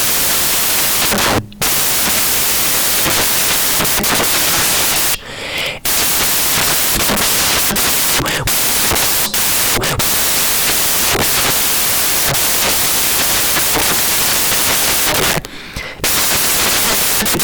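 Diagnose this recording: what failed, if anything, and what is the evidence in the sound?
Samples built from the wrong bytes, throughout: a sample-format conversion fault turns the speech into loud, harsh broadband noise, because misassembled bytes make fast-changing low bits dominate each value.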